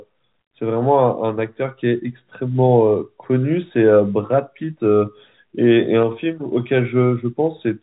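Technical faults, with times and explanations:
No technical faults found; the speech carries the expected G.711 telephone-path character, with nothing above 4 kHz.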